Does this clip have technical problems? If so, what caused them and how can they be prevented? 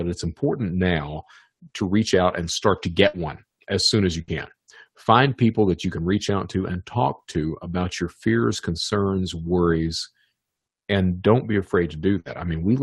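Yes. A burst of packet loss occurs at 3.07–3.16 s after "out and start to", at 4.22–4.31 s after "as soon as you", and at 12.20–12.28 s. Each time the receiver stretches the last sound into a fading fill of about 60 ms, then resumes with about 60 ms of audio skipped. Enabling forward error correction on the call and a steadier network link would prevent these gaps.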